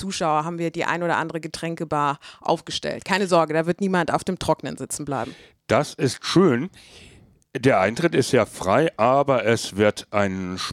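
Nothing stood out on listening to this speech recording.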